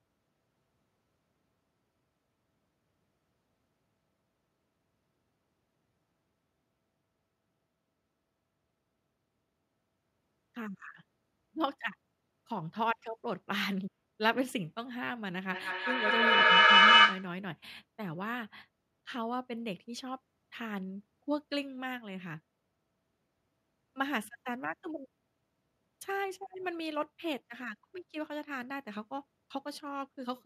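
From 15.51 to 17.37 s there is feedback echo between two devices. One device replays the other's microphone, which captures it again. The speech returns about every fifth of a second, thinner and ringing. The repeats build up, peaking about 15 dB above the speech.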